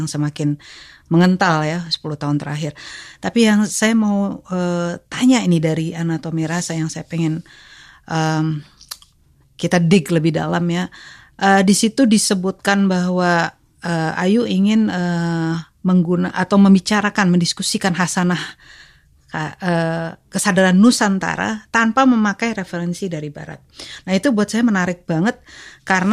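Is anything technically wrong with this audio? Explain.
No, I hear no technical faults in this recording.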